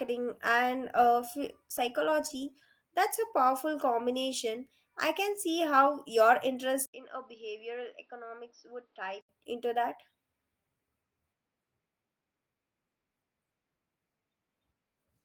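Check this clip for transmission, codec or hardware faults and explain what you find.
One hardware fault appears in this speech. Input switched to a poorer device, 6.86 to 9.29 s: the system likely changed to a narrower-band microphone. After "can see how your", an 80 ms gap leads into dull sound with nothing above 5.9 kHz. It is about 10 dB quieter, with new background noise about 40 dB down, and clears at "into that".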